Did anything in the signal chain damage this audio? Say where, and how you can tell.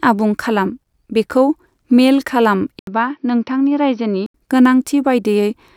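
Yes, at the input device end of the chain. At 2.79 s there's an 80 ms gap. Until 4.34 s the speech then loses everything above 6 kHz, drops a few dB and carries a faint new noise floor, so the input likely switched to a poorer device.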